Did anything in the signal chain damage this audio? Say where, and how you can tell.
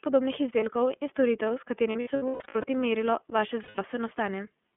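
Yes. The iLBC codec, at the codec stage, colours the whole clip. The speech is band-limited to roughly 200 Hz to 3.4 kHz and has a rough, synthetic edge. That fits iLBC's 30 ms mode at 13.33 kbps, where each frame's excitation is coded independently at a coarse resolution.

Lost iLBC frames, at the network stage, cause two dropouts. From 1.92 to 2.65 s, between "izdelkov in storitev s" and "merilo vaše", 390 ms of audio is lost, scattered across 720 ms, with the longest run near 100 ms. From 3.63 to 3.79 s, right after "merilo vaše", 150 ms is lost. In each gap the decoder repeats the last pitch cycle mixed with noise, which sounds like a held, buzzy vowel, and then recovers almost at once.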